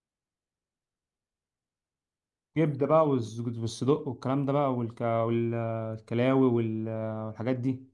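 No technical faults are audible anywhere in the recording.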